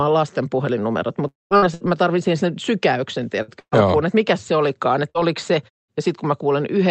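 A long network dropout runs from 1.27 to 1.54 s. About 240 ms of audio never arrives, and the receiver covers the gap by stretching the last sound into a buzz or hiss that fades. For roughly the final 180 ms, only silence is left. The speech then picks up further along, with the missing stretch simply gone. The likely cause is a stall in delivery on the network path.

Bursts of packet loss follow at 1.57–1.65 s, 1.74–1.83 s, 3.42–3.51 s, 3.60–3.75 s and 5.10–5.18 s. Each gap is brief: about 60 ms, except the 3.60 s one, which is about 120 ms. At each gap, the receiver repeats the last sound as a held buzz or hiss and turns it down. In the longer 3.60 s gap, the sound dies away fully for about 70 ms before the speech jumps ahead.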